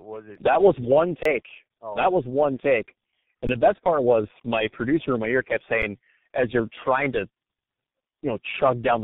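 Throughout, the speech shows tandem speech coding: it passed through three speech codecs in a row, including G.723.1 twice, each re-encoding the previous one's degraded output. It sounds rough, muffled and warbly. On a spectrogram nothing appears above 3.8 kHz, and the harmonics look smeared.

An underrun with held sample occurs from 1.23 to 1.25 s, between "it that was one" and "oh that was one". It lasts about 23 ms, which fits a 1024-sample buffer. Others follow at 3.47 s, after "that was one take", and at 5.82 s, before "as you're trying to". The second lasts about 20 ms. The third lasts about 6 ms, which suggests a 256-sample buffer. Each time, the output buffer ran dry and the converter held its last value. On the waveform this looks like a flat line. Roughly that much live audio was lost each time.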